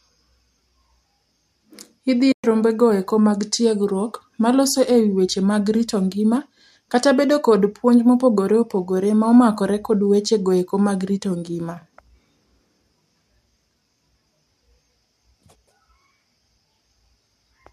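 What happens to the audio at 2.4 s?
AAC frame loss with muting empties the sound from 2.32 to 2.44 s. The decoder zeroes the missing spectrum, and overlapping windows fade it out and back in.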